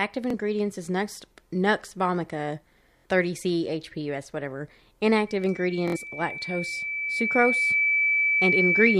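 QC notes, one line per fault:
0.30 s, 2.97 to 3.05 s and 5.88 to 5.97 s, Bluetooth stutter: audio packets arrived late or not at all, so the receiver replayed its last buffer. The first gap is a single 23 ms slice repeated. The later two are three repeats lasting 70 ms, a brief buzz. Each time the speech resumes further on, as if it had kept playing.
5.27 s to the end, loudspeaker feedback squeal: the microphone is picking up the loudspeaker it feeds, and at 2.3 kHz the loop gain exceeds one. That tone swells over roughly three seconds into a squeal sitting about 5 dB above the speech.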